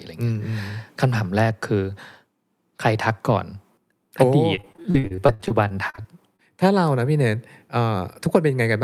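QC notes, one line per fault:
4.55–6.40 s, repeated packet loss (robotic sound): twenty dropouts strike across this stretch of speech, the longest lasting 55 ms. Each hole is papered over by stretching the preceding sound, about 477 ms of patched audio in total, with another 340 ms simply missing. Roughly a quarter of the span is concealed. Because the patches recycle the last pitch period rather than going silent, the result is choppy, with pieces missing, instead of clean gaps, which separates it from plain dropouts.
8.26–8.51 s, jitter buffer speed-up: the speech briefly runs at about 113% of its normal rate while pitch stays put. The receiver's buffer had built up more audio than it targets, so it trimmed short slices of a pitch period or two, about 40 ms in all, to pull the delay back down. Unlike a resampling error, the pitch doesn't rise, and unlike packet loss, nothing sounds broken. 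The speech just seems momentarily hurried.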